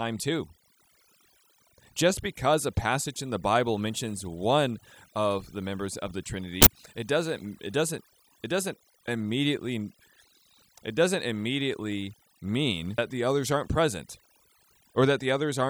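A speech recording with overdone noise removal throughout: a noise reduction stage set far too strong has pulled individual frequency bands down or out whenever they sat near its noise estimate, taking the quieter parts of the voice with them. The background between phrases drops to near silence dotted with twinkling specks. On a spectrogram this shows as a dark floor scattered with isolated bright dots, and the speech harmonics look ragged, with gaps punched out. Two short bursts of damaged data in a compressed stream also occur. The first runs from 6.61 to 6.67 s, after "the members of the" and before "it doesn't it doesn't". The second falls at 12.98 s, between "it doesn't immediately mean" and "the others aren't present". At each point the decoder misread corrupted frames and lost sync while hunting for the next valid header, producing a chirp, squawk, click or short hole. In the waveform these show as abrupt, discontinuous glitches. 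On a spectrogram they appear as narrow vertical breaks that don't match the surrounding speech.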